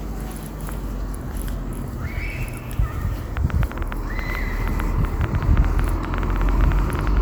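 From 3.37 s to 7.18 s a train of clicks runs over the sound: around forty near-identical ticks, about 9.7 per second at uneven spacing, peaking roughly 10 dB above the audio, likely interference or a faulty connection. Their repeated shape separates them from random crackle.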